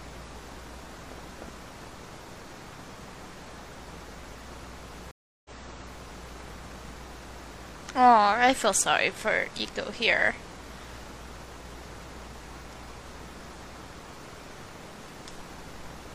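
At 5.11 s the audio drops out for about 335 ms, then resumes 0.84 s earlier than where it stopped, repeating a stretch until about 6.28 s. This is a stream reconnect: the connection broke, and the player restarted a fresh decoder on a server-resent burst.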